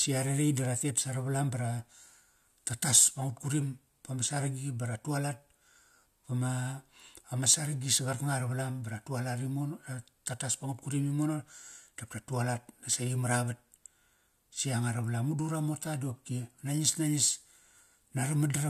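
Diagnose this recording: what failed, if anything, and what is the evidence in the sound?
Nothing in this speech recording stood out as a fault on listening.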